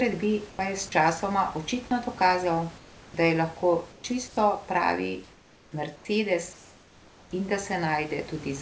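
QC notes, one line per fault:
0.50–7.31 s, comfort noise in place of the background: in the pauses at 0.50–0.59, 2.78–3.14, 3.92–4.04, 4.28–4.37, 5.24–5.72, 5.96–6.05 and 6.53–7.31 s, the room's textured background gives way to a smooth, featureless hiss about 1 to 4 dB quieter. The likely cause is the sender going silent during non-speech while the receiver synthesises noise. On a spectrogram these gaps show flat, uniform grain with abrupt edges. On the waveform, the noise floor steps down slightly.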